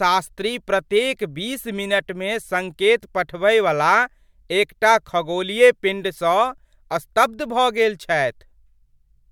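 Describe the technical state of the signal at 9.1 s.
At 9.1 s the speech signal is intact, with no dropout, clipping, glitch or other technical fault.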